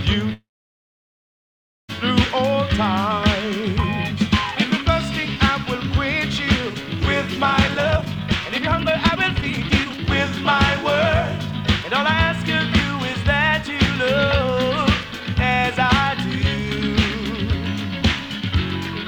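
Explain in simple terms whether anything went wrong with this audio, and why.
Call audio freeze, 0.33 to 1.91 s: the sound stalls and falls silent for about 1.5 s, likely because delayed packets emptied the jitter buffer. Nothing is lost; the sound simply resumes late.

Jitter buffer speed-up, 7.68 to 10.20 s and 15.03 to 15.76 s: to catch up on built-up delay, tiny slices were cut out, so the sound plays hurried at the same pitch. The first stretch runs about 1.5 times normal speed and drops roughly a second and a half; the second is only slightly faster.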